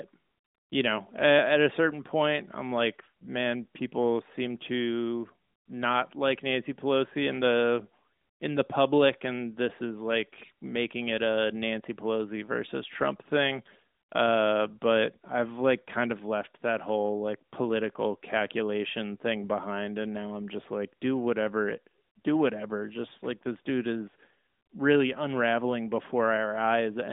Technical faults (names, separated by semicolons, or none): none